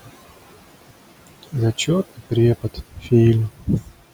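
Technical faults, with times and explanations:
Throughout, noise suppressor artifacts: the suppressor pulls down the bands it judges to be steady noise by about 17 dB, frame by frame. The room noise, sitting about 19 dB under the speech, sinks in the gaps and comes back up beneath the talking.
2.62 to 3.12 s and 3.55 to 4.0 s, speech cut by the noise suppressor: in both spans the suppressor mistakes part of the speech for noise. It turns those parts down with the background, by up to about 19 dB in the first span and about 17 dB in the second. Roughly a third of a second is affected each time. Softer sounds there come out swallowed and faint, as if the talker briefly dropped away.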